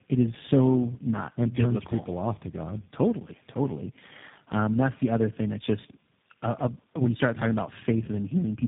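Throughout the clip, tandem speech coding leaves the speech rough, muffled and warbly, consistent with being decoded and re-encoded through about four speech codecs in turn, ending in something like G.729A. A spectrogram shows nothing above 3.7 kHz, with smeared, blotchy harmonics.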